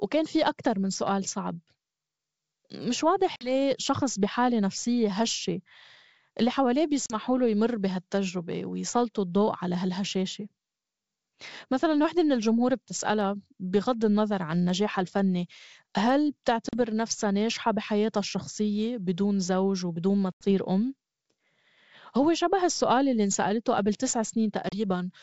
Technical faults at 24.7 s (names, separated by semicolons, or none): packet loss on an ADPCM call